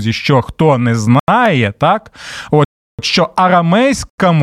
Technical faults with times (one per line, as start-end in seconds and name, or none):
1.19-1.28 block of digital silence
2.65-2.99 block of digital silence
4.10-4.18 block of digital silence